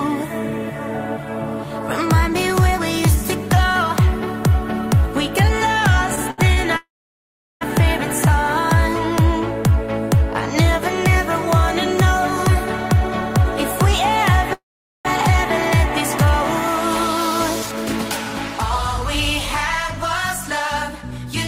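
Repeated stalls (stutter) occur from 6.15 to 6.59 s: three brief gaps, the longest 69 ms, are filled by continuing the preceding sound. Late packets kept draining the jitter buffer, so about 124 ms of filler, roughly 29% of that span, makes the audio drag and hiccup.

A call audio freeze follows at 6.77 to 7.63 s. The last sound trails off into about 0.74 s of silence, then the audio resumes where it left off, 0.84 s later. This is likely held-up packets emptying the jitter buffer, with nothing lost.

A jitter buffer speed-up runs from 12.47 to 13.45 s. After the backlog, the receiver trims short pitch-period slices, roughly 70 ms in total, so the audio runs at 106% speed, sounding hurried with the pitch unchanged.

A second call audio freeze at 14.53 to 15.07 s stalls the sound for 0.52 s, with about 0.43 s of it silent, before continuing unbroken.

A second jitter buffer speed-up from 20.89 to 21.33 s is more pronounced at 113%, again removing roughly 70 ms and audibly rushing the final moments.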